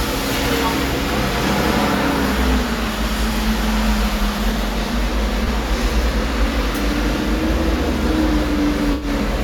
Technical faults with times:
5.44-5.47 corrupt frame concealed
8.92-9.08 corrupt frame concealed

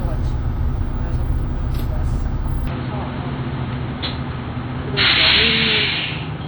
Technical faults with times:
0.00-6.47 WMA compression
2.67-6.47 input switched to a poorer device

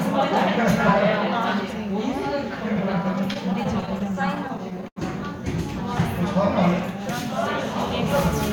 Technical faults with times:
3.33-4.98 repeated stalls (stutter)

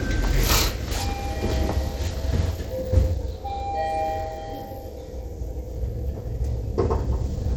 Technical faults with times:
0.00-7.56 Bluetooth SBC compression

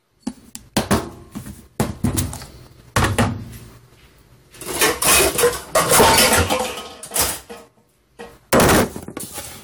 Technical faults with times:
0.00-9.63 generation loss

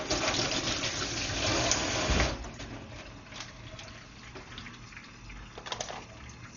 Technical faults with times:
0.00-6.56 Dolby Digital compression

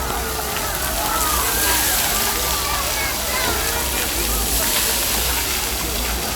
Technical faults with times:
none

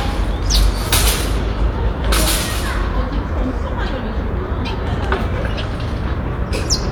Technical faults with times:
none

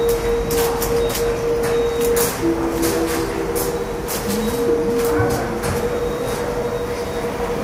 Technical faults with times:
none

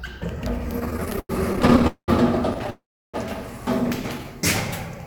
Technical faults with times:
0.79-1.85 repeated stalls (stutter)
1.87-2.10 call audio freeze
2.54-2.70 repeated stalls (stutter)
2.70-3.16 call audio freeze

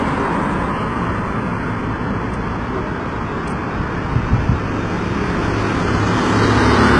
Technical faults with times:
0.00-6.99 HE-AAC compression

